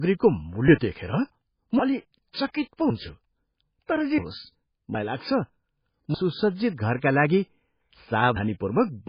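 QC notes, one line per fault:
Throughout: low-bitrate audio saved at a high bitrate; nothing above 5 kHz, coarse MP3 artefacts, likely a low-rate MP3 re-encoded higher, which cannot restore losses.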